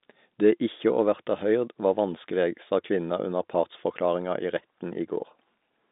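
Nothing in this recording reveals any technical fault.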